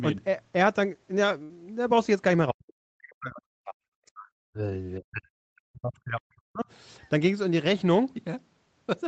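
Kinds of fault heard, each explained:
Burst of packet loss: At 1.43 s the speech breaks for about 0.08 s. Some audio failed to arrive in time. The receiver covered the hole by stretching the last sound it had for about 60 ms and fading it down, so a held buzz or hiss replaces the speech. Then playback jumps ahead. About 60 ms of the original speech is simply gone, and the speech resumes slightly further on at 1.51 s.
Speech suppressed in double talk: The speech sinks sharply in four stretches, from 2.50 to 4.33 s, 4.51 to 4.63 s, 4.99 to 5.25 s and 5.53 to 6.67 s. At its deepest it drops by roughly 40 dB, almost to silence. The likely cause is an echo canceller that could not tell this talker from the returning echo while both sides spoke, and so turned the speech down.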